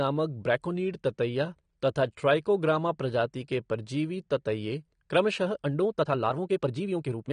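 Across the whole speech clip the sound is dull and smeared, with a fizzy, warbling texture on sibilants and held sounds. This is most likely AAC compression, probably AAC-LC at a low rate that fits roughly 32 kbps. With so few bits the encoder drops the top band entirely and coarsely quantises what remains, leaving gaps and substitute noise in the spectrum that the ear hears as swirling grit.

From 5.43 s to the end the delivery suddenly rushes, running about 1.57 times faster while the pitch stays put. This is a time-stretched section, likely made by software squeezing the passage to a shorter length. To hold the pitch steady it discards short slices of the waveform and splices the rest together, and those removed fragments produce the hurried character.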